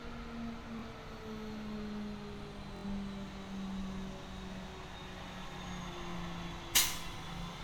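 Bluetooth stutter occurs at 0.79 to 0.82 s, 2.77 to 2.85 s and 6.11 to 6.15 s. Late or missing packets made the receiver replay its last short slice. Each event repeats a 23 ms fragment. The middle one lasts 70 ms, enough for three repeats, a brief buzz. The sound then jumps ahead.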